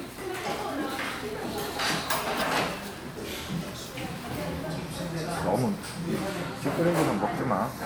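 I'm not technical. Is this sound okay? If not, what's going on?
Yes, no faults to hear.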